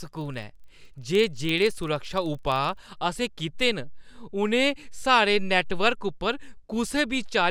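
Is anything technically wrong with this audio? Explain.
Yes. From 0 to 3.02 s, a filter restarted on every block forgets its state, leaving a 23.4 Hz buzz that follows the speech level. This fits 2048-sample blocks.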